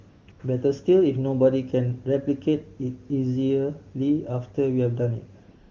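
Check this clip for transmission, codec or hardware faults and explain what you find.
There is one kind of fault: AMR comfort noise replaces the real background in three short gaps in this speech.

AMR comfort noise occurs from 0.09 to 0.27 s (180 ms), 0.31 to 0.39 s (80 ms) and 5.43 to 5.71 s (276 ms). The sending phone judged these stretches silent and stopped transmitting speech frames. The receiver then generated synthetic noise from a coarse level-and-spectrum description. It sounds like a smooth, steady hiss that switches in and out. On a spectrogram these spans show uniform, featureless noise with abrupt edges. On the waveform they appear as a flat, even band.

The wideband (HD Voice) coding is clear, which fits AMR-WB near its top rate.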